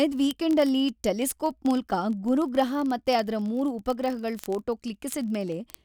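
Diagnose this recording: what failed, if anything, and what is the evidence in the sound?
Word clock ticks at the converter's unlocked digital input. Sharp ticks recur roughly every 20 ms, 0.11 to 5.83 s. Each is one slipped sample.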